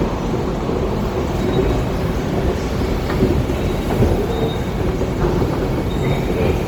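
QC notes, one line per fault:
Throughout: Opus compression. The encoder was likely starved of bits and running in its CELT music mode, which keeps each band's energy but fills what it cannot code properly with folded copies of lower bands or with noise. The result is plainly audible: tonal parts turn grainy and rough rather than swirly, while the bandwidth stays full, reaching about 20.2 kHz. The damage fits a 24 kbps stream.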